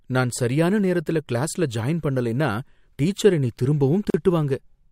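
A gap at a join of encoded pieces opens from 4.10 to 4.14 s, just after "ஜாயின் பண்ணலைன்னா டீச்சர் என்னை". Separately encoded segments were spliced with their padding left in, so about 40 ms of silence cuts the speech abruptly before it resumes where it stopped.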